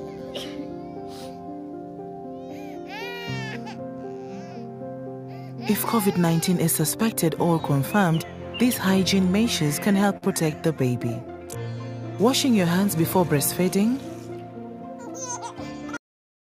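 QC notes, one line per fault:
10.17–10.24 s, short stall from a late packet: one sound is held about 46 ms too long, with a slight buzz or dip, before the audio picks up exactly where it left off. Nothing is skipped. A packet came in late, the jitter buffer ran dry, and the receiver stretched the last stretch of sound to bridge the gap. Playback then resumed from the same point, so everything after this sits roughly 46 ms later than it would have.
13.64–13.99 s, jitter buffer speed-up: for about a third of a second the audio sounds hurried, running at about 111% of normal pace while keeping the same pitch. The buffer had built up more audio than it aims to hold, so the receiver trimmed it back by repeatedly cutting out short pieces one or a few pitch periods long, removing roughly 50 ms in total. The pitch stays put because whole periods were removed rather than the playback rate being raised.
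15.97 s, cut-off end: the audio stops abruptly in the middle of a sound and falls straight to digital silence, with no natural decay or fade, and the silence holds to the end of the clip. This happens when the final buffers are never written out or played, so whatever was still sounding is simply chopped off at that instant instead of being allowed to ring out.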